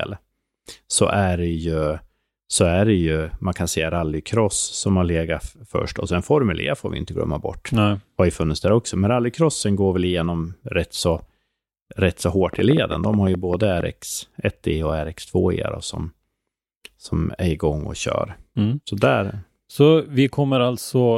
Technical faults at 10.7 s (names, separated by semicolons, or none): none